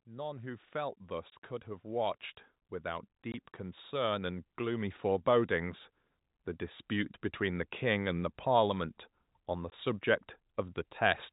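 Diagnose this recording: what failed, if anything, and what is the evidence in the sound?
Call processing stage: automatic gain rising. From 0.05 to 2.29 s the level climbs by about 7 dB, then again from 2.82 to 5.86 s by about 6 dB, with the speech and the background noise swelling together rather than the talker getting louder. The gain control judged the input too quiet and ramped its gain up slowly. On a waveform the envelope widens steadily across each span, and on a spectrogram the noise floor brightens along with the speech.

Network stage: packet loss filled with silence. Hard dropouts occur at 1.30, 3.32 and 9.70 s, each 20 ms long, which fits a single lost 20 ms packet each time. The receiver substituted silence for the missing audio, so each gap begins and ends with an abrupt edge. A waveform shows a flat line with square shoulders, and a spectrogram shows a thin vertical blank band. 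The G.711 mu-law telephone coding carrying the call keeps its usual 4 kHz ceiling.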